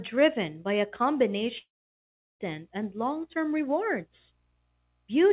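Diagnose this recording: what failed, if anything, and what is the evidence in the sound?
A long network dropout runs from 1.58 to 2.41 s, likely sustained packet loss. A brief fading fill gives way to 0.73 s of silence, then speech resumes without the lost stretch.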